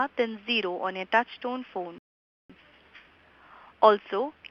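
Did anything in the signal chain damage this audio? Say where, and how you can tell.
Yes, a rebuffering stall at the playback stage. From 1.98 s to 2.50 s the sound drops to silence, then resumes exactly where it stopped. The player's buffer ran dry and waited for more data, adding about 0.51 s without losing any audio.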